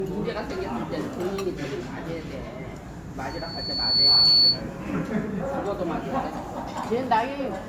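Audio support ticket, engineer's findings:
Transcoding between lossy codecs, whole clip. Two distinct artefact textures heard together. Nothing above 20 kHz. Likely cause: a double lossy encode, the sound fitting a Vorbis encode near 63 kbit/s re-encoded to Opus near 48 kbit/s. The second encoder spends bits reproducing the first encoder's artefacts and adds its own. Component: upstream encode chain.

Loudspeaker feedback squeal, 3.30 to 4.62 s. Single 4.4 kHz tone swells over roughly 0.7 s into a squeal, peaking around 15 dB above the programme. Component: open mic feeding its own monitor or PA. Loop gain exceeds unity at 4.4 kHz, so that frequency regenerates until the loop is broken.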